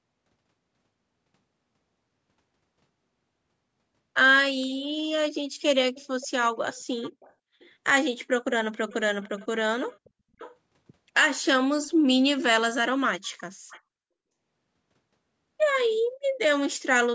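Echo leak at 5.94 to 7.7 s, 8.75 to 9.47 s, 9.89 to 10.56 s and 13.23 to 13.81 s: a faint, half-second-late copy of the speech (about 0.5 s, then 0.55 s), likely from the far end's echo canceller missing its loudspeaker pickup, comes back well below the speech.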